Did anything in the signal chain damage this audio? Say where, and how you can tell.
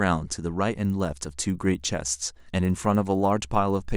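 Yes. From 0.8 s to the end of the speech there is a regular tick at 20 Hz, one every 50 ms, that follows the level of the signal. This points to a resampler restarted on every block in the driver or buffer stage, most likely converting 24 kHz to 48 kHz. Each 50 ms block was converted with no knowledge of its neighbours, leaving a small error at every edge. Unlike buffer underruns, the ticks are perfectly periodic and no audio goes missing.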